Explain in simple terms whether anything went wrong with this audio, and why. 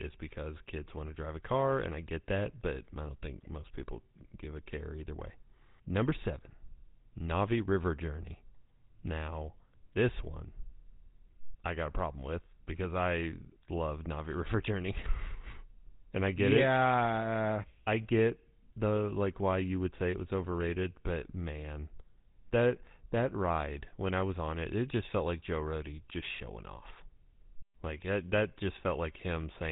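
The speech sounds buzzy and gravelly from start to finish, with a plainly audible rough, grainy edge and a muffled, phone-like dullness. That is the signature of the GSM full-rate codec, an early mobile-phone format. It rebuilds speech from a rough model of the mouth and throat, fed by a coarse train of pulses that keeps only part of the detail. It also cuts everything above 4 kHz, which removes the crispness.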